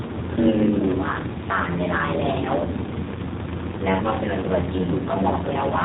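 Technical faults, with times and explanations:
Throughout, block size mismatch (padded): A steady buzz at about 93.8 Hz runs under the speech, and everything plays slower, at 0.861 times normal speed, while the timbre stays about where it should be. One stage hands over blocks shorter than the next stage reads, which fits a 512-sample read, and the remainder of each block is filled with silence. Those regular tiny gaps produce the buzz at the block rate and stretch the timing.
Throughout, G.729 codec: The speech is clearly rough and somewhat synthetic, with nothing above 4 kHz, so it sounds muffled. The damage is plainly audible, though the speech stays intelligible. The sound fits an 8 kbit/s G.729-family coder, which does not send the waveform itself. It rebuilds speech from a vocal tract filter, a pitch predictor and a few pulses per short frame, and those sparse pulses give the coarse, artificial texture.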